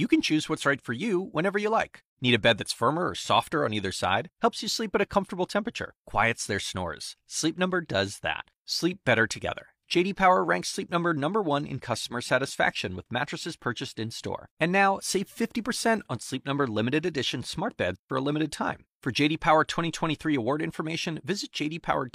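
No technical faults are audible.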